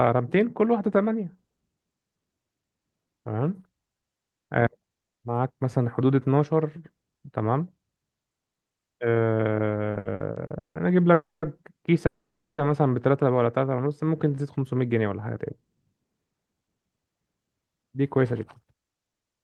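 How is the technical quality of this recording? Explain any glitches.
The recording has network-related timing faults in its second half. Four kinds of glitch appear between about 9.9 s and the end.

From 9.91 to 10.77 s there are repeated stalls (stutter). The speech halts six times. The longest halt lasts 170 ms. Packets were arriving late, so the receiver's jitter buffer kept running dry. Each time, it stretched the last sound to cover the wait. About 380 ms was filled this way, which is 44% of that stretch. Nothing is lost, but the speech drags and stutters.

Two call audio freezes follow, at 11.13 to 11.44 s and 12.06 to 12.60 s. The likely cause is packets held up in transit, which emptied the jitter buffer. The last sound carries on briefly as a fading buzz or hiss and then drops to silence. The first freeze is silent for about 200 ms of its 290 ms. The second is silent for 480 ms of its 520 ms. 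The speech then resumes where it stopped, so delay is added but nothing is missing.

From 13.65 to 14.80 s there is a jitter buffer slow-down. The buffer was low or had just raised its target delay, so the receiver rebuilt its reserve. It did this by repeating single pitch periods and small pieces of pauses. This added 128 ms. The speech plays at 90% speed with unchanged pitch. Sounds are drawn out, and a slight warble may be audible.

From 16.46 s to 19.41 s there is a jitter buffer speed-up. The buffer now held more audio than its target, so the receiver trimmed short pitch-period pieces to cut the delay. Around a third of a second was removed in total. The speech runs at 111% speed with unchanged pitch. It sounds noticeably hurried.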